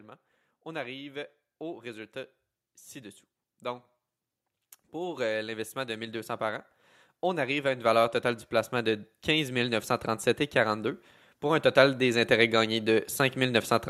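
Automatic gain rising swells speech and background together at 0.05–2.17 s (about 3 dB), 4.92–6.7 s (about 4 dB), 7.21–9.93 s (about 6 dB) and 11.41–13.66 s (about 4 dB); the waveform envelope and spectrogram noise floor climb steadily.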